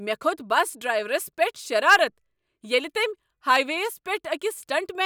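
No technical faults can be heard anywhere in this speech recording. There is nothing in the signal that calls for a timestamp or further comment.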